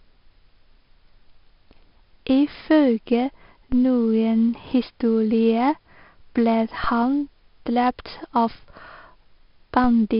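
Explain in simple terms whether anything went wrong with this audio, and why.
Two things went wrong. The whole recording has been squeezed with 4-bit ADPCM compression, applied heavily: every louder stretch of speech carries a gritty hiss that rises and falls with it, sharp sounds crunch, and nothing above 5.3 kHz survives, so it also sounds dull.

There are also three DC steps, at 3.72, 6.84 and 9.84 seconds. Each time, the waveform's resting level suddenly jumps and then drifts back, producing a brief low thump. Unlike a dropout or glitch, the speech carries on completely unbroken underneath each thump.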